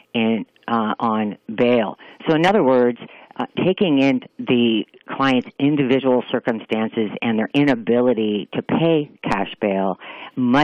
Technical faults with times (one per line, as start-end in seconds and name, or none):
none